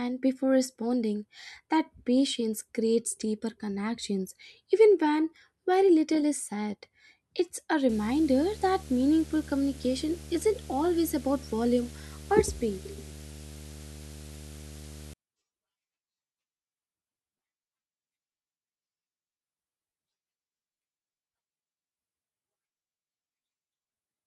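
From 7.89 s to 15.14 s the speech carries a video or display buzz, a rasping tone at 75 Hz with a spray of fine hash riding above it, sitting roughly 20 dB below the speech. A screen or its video cable is coupling into the audio path, and the 75 Hz figure matches a display's field rate. That separates it from mains hum, which would sit at 50 or 60 Hz and sound smoother, without the hash.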